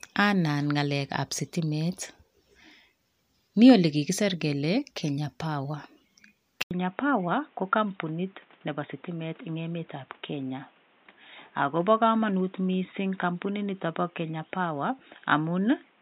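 At 6.63 s the speech stops for 80 ms, then returns dull and boxy until the end, with nothing above 3.8 kHz and a new noise floor about 35 dB below the signal, at roughly unchanged loudness. This is likely an input switched to a poorer device, whose narrower band and own background noise replace the original microphone's.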